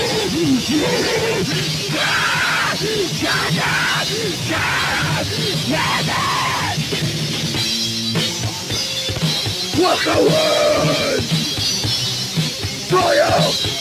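Hard clipping runs through the whole clip. The signal was driven about 14 dB past what one stage could pass, so nearly a third of the waveform has its peaks sliced flat. Those flat tops add high harmonics, heard as a constant fuzz on every loud sound.

A noise suppressor applied to music or sounds is also active throughout. Built for speech, it treats sustained tones, ambience and decay as noise and pulls them down by swings of around 5 dB. Onsets pass while held sounds and tails sink, so the audio pumps, flutters or thins.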